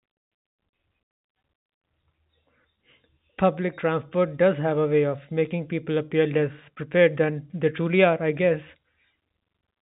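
Nothing stood out on listening to this speech, which comes through a G.711 telephone path with nothing audible above about 3.8 kHz.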